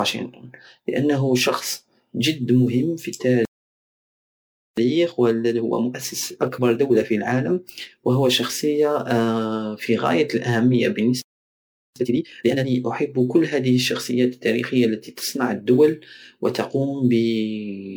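Generation loss runs through the whole speech recording. It sounds swirly and hollow, with blurred consonant attacks, more damaged than a single MP3 pass near 128 kbit/s would explain. The likely cause is repeated MP3 encoding, about four times. A spectrogram shows patchy holes and nothing above 20.9 kHz.

A playback stall starts at 3.45 s, right after "جد مهم في". The sound cuts out mid-flow for 1.32 s and returns at 4.77 s. The waveform drops to a flat line, and the spectrogram shows a blank vertical band. The player likely ran out of data.

Time-compressed catch-up follows from 4.77 to 7.77 s. Playback runs at 1.15 times normal speed while the pitch stays the same. Small pieces are cut out and cross-faded, which packs syllables closer together on the waveform.

A second playback stall begins at 11.22 s, after "في غاية الاهمية", and lasts 0.74 s until 11.96 s. It again shows as a flat waveform gap and an empty spectrogram column. 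The likely cause is another buffer underrun or a blocked player thread.

A second time-compressed catch-up runs from 11.96 to 12.70 s at double speed. The speech is strongly hurried at normal pitch, and the waveform shows syllables tightly crowded together.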